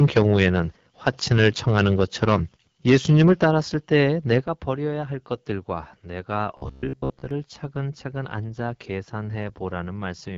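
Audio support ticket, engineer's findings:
AMR wideband (HD Voice) codec, full clip: speech rough and raspy, no content above 7.5 kHz. Texture fits AMR-WB's low 8.85 kbit/s mode. The rasp is coding damage, not a plain bandwidth limit, which would sound dull but clean.

Microphone overload, 4.3 to 4.38 s: harsh crackle on the loudest peak, tops flattened, about 3 dB past full scale with a few percent of samples clipped. Likely cause is input gain set too hot at the converter. Brief, level-tied, unlike steady codec rasp.

Microphone volume stepped down, 4.44 s: speech and background drop together by about 7 dB in one step, right after the clipped peak. Likely automatic input gain correction reacting to the overload. Both drop at once, so not a speaker moving away.

Robotic sound from repeated short buffers, 6.57 to 7.31 s: rigid metallic buzz at 66.7 Hz that loosely tracks the speech. The 15 ms repeat period fits a 15 ms buffer replayed while most new audio is skipped. 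Likely input starvation. Fixed pitch separates it from codec rasp.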